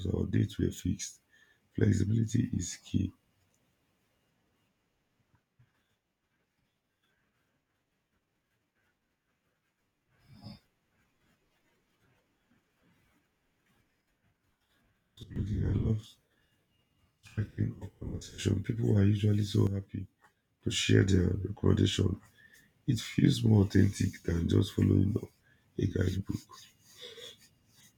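At 15.23 s the speech and its background noise drop together by about 12 dB, recovering at 15.36 s; a second sudden gain jump pulls the level down by about 7 dB from 19.67 s to 20.61 s. Each step happens between adjacent samples with no ramp, so the floor shifts along with the speech. The likely cause is a digital gain setting applied instantly rather than faded in.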